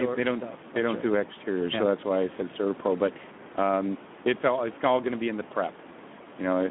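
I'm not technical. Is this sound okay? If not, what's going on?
No. Speex codec damage runs through the whole clip. This older speech compressor saves data by rebuilding the voice from a rough model, so the speech sounds hoarse and noisy. It also has a thin, phone-like tone, with nothing above about 3.8 kHz. The room noise underneath is simply part of the recording.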